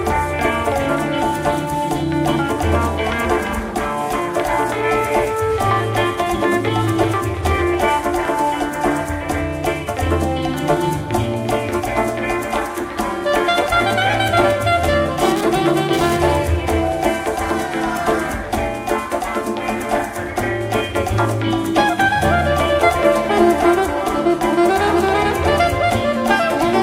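GSM phone buzz from 15.19 to 16.17 s: a nearby 2G phone's 217 Hz transmit bursts, rectified by the audio circuit, give a harsh, raspy buzz about 12 dB below the signal.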